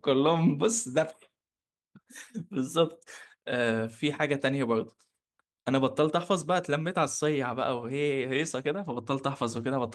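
No technical faults are audible.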